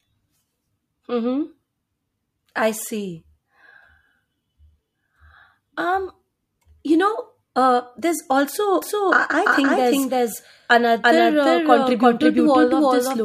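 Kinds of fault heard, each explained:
doubled audio track: from 8.82 s, just after "uh there's", to the end, a second full-band copy of the speech trails about 300 ms behind at roughly equal loudness, likely a second, slower capture path. Unlike echo or reverb, it never decays, lacks room colour, and begins abruptly.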